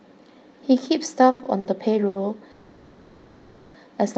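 A speech clip, carried over a call link whose band ends near 8 kHz, which fits Opus at about 32 kbps. Short stalls from a late packet occur at 1.31–1.41 s, 1.43–1.47 s, 1.59–1.67 s and 2.07–2.17 s. Each time a packet arrived late and the jitter buffer ran dry. The last sound is stretched for 20 to 80 ms, with a slight buzz or dip, and then the speech resumes with nothing lost. A call audio freeze runs from 2.51 to 3.76 s. The sound is held as a fading buzz or hiss for about 1.2 s and never drops to silence. The speech then picks up where it stopped, so a gap has been added and nothing is lost. The likely cause is packets held up in transit, which emptied the jitter buffer.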